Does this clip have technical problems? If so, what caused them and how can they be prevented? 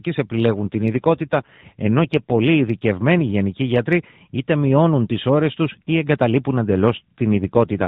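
Yes. From 0.61 to 2.42 s, just before "ειδικευμένοι γενικοί γιατροί είτε", and again from 7.32 to 7.88 s, the speech turns rougher, buzzier and more synthetic while the narrowband mobile-call sound of AMR-NB stays the same. This is an AMR rate drop. On a weak radio link the network lowers the codec's speech rate to free bits for error protection, here consistent with a step from about 12.2 to 5.9 kbps. With fewer bits to describe each frame, the voice loses detail until the rate recovers. It can be prevented by keeping the handset in good radio coverage or using a wideband or Wi-Fi calling path during recording.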